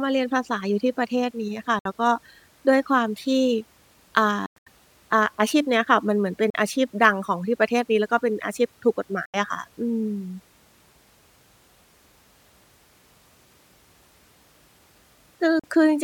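Packets on the wireless link to the headphones were late and dropped, most likely a Bluetooth dropout, so the speech cuts to silence with hard edges and then picks up further along, as if it had run on unheard. The gaps fall at 1.79–1.85 s (61 ms), 4.46–4.67 s (183 ms lost in bursts, the longest about 100 ms), 6.50–6.54 s (41 ms), 9.25–9.34 s (81 ms) and 15.59–15.64 s (41 ms). The gap lengths fit packets of about 20 ms each.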